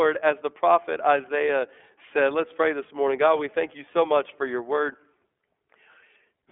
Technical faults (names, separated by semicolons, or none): iLBC codec